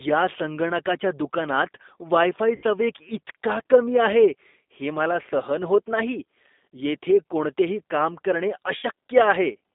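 The whole clip has been through the G.729 codec, most likely G.729A at 8 kbit/s. The speech is squeezed into a phone band of roughly 250 Hz to 3.7 kHz and rebuilt from a filter, a pitch predictor and sparse pulses, so it comes across plainly rough and a bit synthetic.

At 2.56 s and again at 8.77 s there's VoIP packet loss concealed by the speech codec. That sounds like about 60 ms of audio going missing each time, which fits three lost packets. The decoder fills each gap by stretching its last pitch and filter into a fading buzzy tone or coloured noise, and the voice stays weak until about 2.64 s and 8.87 s respectively.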